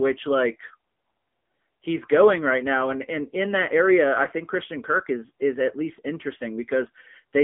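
Speech runs through an AMR narrowband mobile codec for its whole length. The band is confined to roughly 200 Hz to 3.5 kHz, with nothing above 3.8 kHz, giving the muffled telephone quality of 8 kHz sampling. The coding damage is plainly audible: the voice sounds buzzy and synthetic because the vocal-tract model is driven by only a few pulses per subframe. That degree of damage fits a low AMR-NB mode of about 7.95 kbps.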